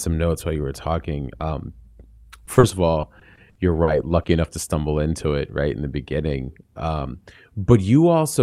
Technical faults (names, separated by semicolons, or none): short concealed packet loss; repeated packet loss (robotic sound)